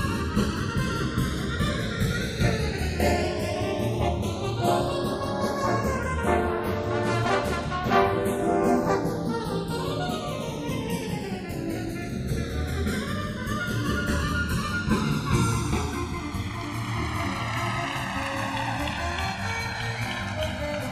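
From start to end the channels drift apart: one side runs on a clock about 100 parts per million off, so the gap between left and right slowly grows to roughly a millisecond and a half. Summed to mono, this sounds like slow flanging, seen on a spectrogram as comb notches gliding downward through the spectrum.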